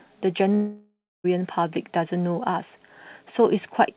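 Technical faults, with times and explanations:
0.54–1.26 s, long network dropout: For about 0.7 s the sound stops being real. The receiver stretches the last fragment into a buzzy, fading fill, and roughly the final 0.3 s of the gap sinks to near silence before the sound resumes with the missing stretch simply gone. The likely cause is a run of lost packets. A brief packet-loss glitch is patched in a few tens of milliseconds, and a plain mute has no decaying tail. The fill here stays band-limited to 4 kHz, like the narrowband call codec around it.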